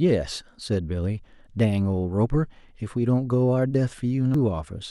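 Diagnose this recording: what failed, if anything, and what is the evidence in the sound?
A glitch at 4.34 s points to damaged data in a compressed stream: the codec lost frame sync on corrupted bytes.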